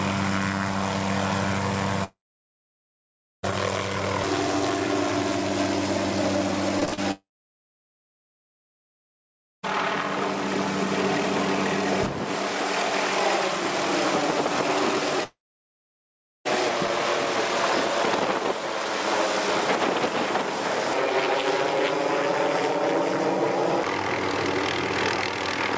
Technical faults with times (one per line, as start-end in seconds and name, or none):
2.04-3.45 long network dropout
6.80-6.99 repeated packet loss (robotic sound)
7.11-9.65 long network dropout
15.23-16.47 long network dropout